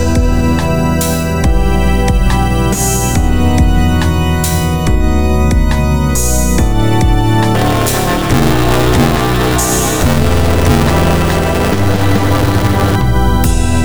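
From 7.55 s to 12.96 s the ring buffer suffers buffer tearing: the writing program and the reading hardware have slipped, so each period mixes fresh audio with roughly two fifths left over from the previous lap, about ten milliseconds stale. The hard joins recur at 188 Hz, which fits a 256-sample buffer, giving a steady robotic buzz laid over the sound that stops once the fault ends.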